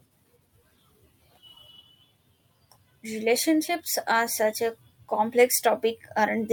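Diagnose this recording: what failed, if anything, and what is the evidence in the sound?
Nothing in the recording points to a failure at any stage of the chain, and the speech signal stays steady and continuous throughout with no audible disturbance.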